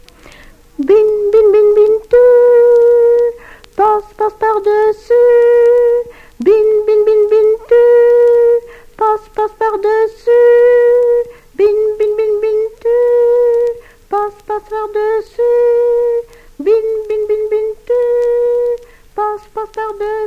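Nothing here trips a listener up: no dropouts, glitches or distortion turn up anywhere along the way, so there's simply nothing to flag.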